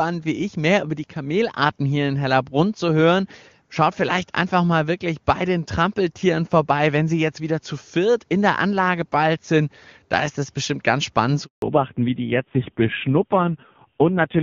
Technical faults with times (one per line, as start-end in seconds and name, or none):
11.44-11.62 handover gap
11.62-14.43 fallback to narrowband